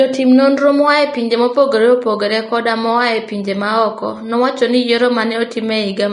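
Throughout the speech, the treble is grainy and hissy, with softened consonant attacks and nothing above about 10.6 kHz. This is likely Vorbis compression at a low setting, around 35 kbps, where coarse quantisation of the upper residue turns fine detail into noise.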